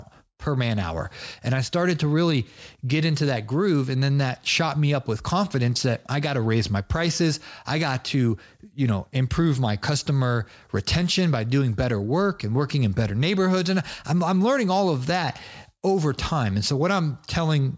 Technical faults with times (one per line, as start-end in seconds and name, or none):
none